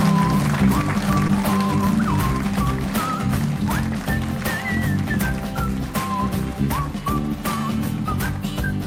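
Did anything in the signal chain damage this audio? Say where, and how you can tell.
Yes. The damage happened at the network stage, where a short concealed packet loss occurred between about 1.27 and 1.31 s. Roughly 20 ms of the stream never reached the decoder in time. The receiver filled 14 ms of it by extending the last sound it had, either from its pitch or as shaped noise, and then blended back into the real audio. In the clip this is heard as a brief smear or wobble at that point.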